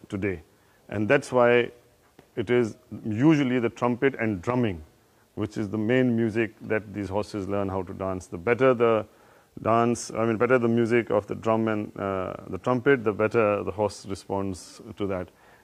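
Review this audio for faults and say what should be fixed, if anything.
Nothing needs fixing: the signal holds steady throughout, with no technical fault to be heard anywhere in the recording.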